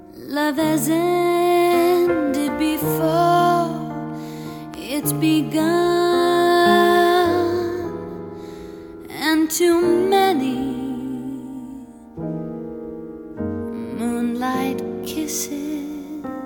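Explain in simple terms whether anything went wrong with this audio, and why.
A loud pop occurs at 4.74 to 4.76 s, a single sharp click lasting a fiftieth of a second and louder than the surrounding audio, which carries on underneath without a break. It was likely caused by a sudden jolt of electricity, from something like a plug being moved, a switch being flipped, static, or a brief hiccup in the audio hardware. That jolt got added to the sound, and the equipment after it turned it into this brief pop.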